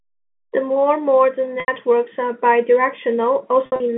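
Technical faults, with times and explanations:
1.60–1.68 s, packet loss with pitch repetition: just after "more modern", about 80 ms of signal goes missing. The receiver fills the gap by looping the last pitch period, which is heard as a brief, slightly held buzz before the speech resumes. The length points to four 20 ms packets.
3.66–3.80 s, packet loss with pitch repetition: about 100 ms is lost, scattered over 140 ms, with the longest unbroken run at 60 ms. The repeated pitch cycles sound as short buzzy holds, each cross-fading back into the speech, heard through the narrow 150 Hz to 3.5 kHz band of the G.711 telephone line.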